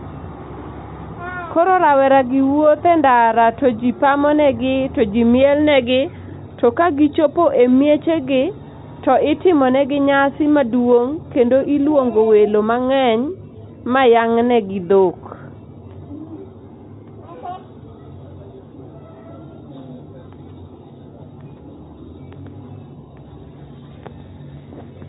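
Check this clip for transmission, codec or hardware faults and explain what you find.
No faults can be heard; the speech has the narrow telephone-band sound of G.711 A-law coding, with nothing above 3.8 kHz, consistent with a 64 kbps line working as intended.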